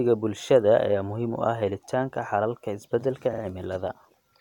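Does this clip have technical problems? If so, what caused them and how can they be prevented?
Yes. Repeated frames at 3.32–3.42 s: a 46.4 ms slice plays twice more, a stutter adding 92.9 ms. The spectrogram shows identical blocks side by side. Deduplicating frames by timestamp before decoding prevents it.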